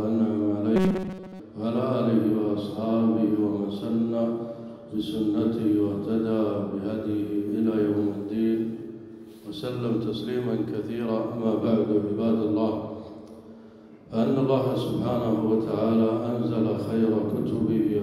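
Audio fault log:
0.76–1.40 s, robotic sound from repeated short buffers: a rigid metallic buzz at 188 Hz, likely from roughly 5 ms buffers looping over most of the skipped audio.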